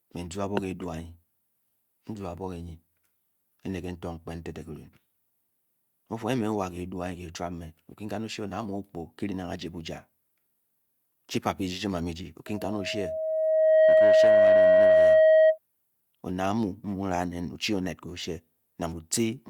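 At 12.46 s a loudspeaker feedback squeal starts. A 634 Hz tone swells over about a second and a half, towering above the speech, until 15.58 s.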